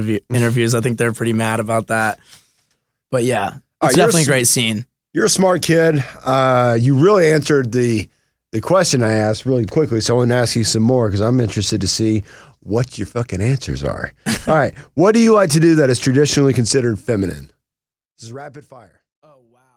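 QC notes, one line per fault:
No faults found in this speech clip.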